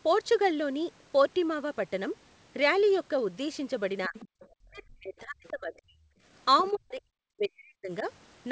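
At 4.07 s the speech dips briefly, by something like 20 dB for about 70 ms. This is speech suppressed in double talk, most likely an echo canceller that could not tell the near talker from loudspeaker echo and pulled the whole signal down. From 4.14 to 4.47 s the other side's voice leaks through, faint at roughly 20 dB under the speech. It likely comes from loudspeaker echo that the canceller failed to remove. Then from 4.48 to 5.98 s the speech is suppressed again, much harder, with drops of around 40 dB spread over about one and a half seconds. A second short leak of the far voice follows at 6.58 to 6.77 s, quieter at about 25 dB down, and it overlaps a further double-talk suppression running from 6.64 to 8.05 s. That one also reaches roughly 40 dB of attenuation and affects the speech across about a second in total. Throughout the clip the band stops at 8 kHz, consistent with the call path's wideband G.722 coding.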